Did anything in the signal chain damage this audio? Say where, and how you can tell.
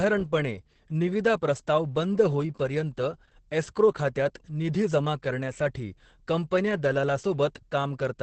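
Yes. The speech sounds muffled, hoarse and faintly robotic throughout, with nothing above 8.6 kHz. That points to Opus voice compression at the codec stage: a wideband SILK linear-prediction coder coarsely coding the excitation, which fits a bitrate near 10 kbps.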